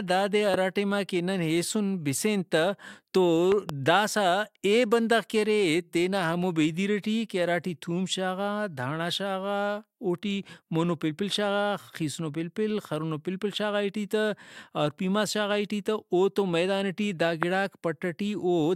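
Loud pops at 0.54–0.56 s, 3.52–3.71 s (a double pop) and 17.43–17.45 s, each about 15–20 dB above the speech, likely from a sudden voltage spike such as static or a switch.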